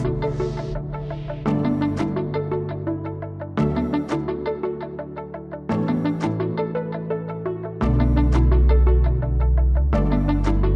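No technical faults can be heard anywhere in the signal.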